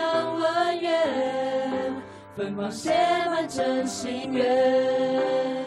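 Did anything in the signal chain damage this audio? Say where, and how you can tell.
Yes. Compressed frames are skipped at 4.24 s, at the codec or storage stage. About a tenth of a second of sound is missing, roughly five 23.2 ms frames the decoder never played.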